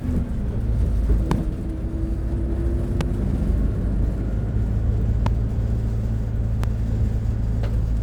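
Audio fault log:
1.31–1.34 s, 3.01–3.03 s, 5.26–5.29 s, 6.64–6.66 s: loud pop. Each is a single sharp thump, about 15 dB above the sound (the last nearer 10 dB), likely from a brief voltage step from a switch, static or driver glitch riding on top while the sound continues underneath.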